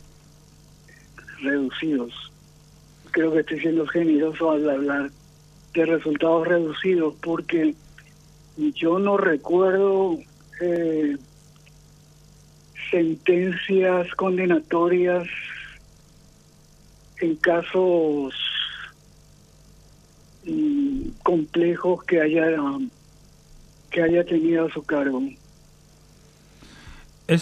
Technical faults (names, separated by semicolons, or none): DAB burbling